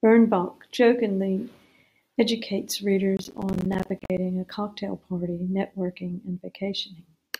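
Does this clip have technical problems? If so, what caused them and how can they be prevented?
Yes: processor overload crackle, 3.17 to 4.18 s, ending before "a cocktail party networking". Dozens of missed buffers, each a gap of about 10 ms, leave a gritty stream of gaps rather than one clean dropout. Preventing it means reducing the processing load or using a larger audio buffer so every deadline is met.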